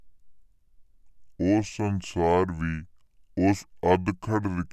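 From start to finish the speech sounds low and sluggish, running at two-thirds speed with pitch dropped about 7 semitones. This is a wrong sample rate: samples played slower than recorded, with no conversion, which fits 48 kHz audio played back at 32 kHz.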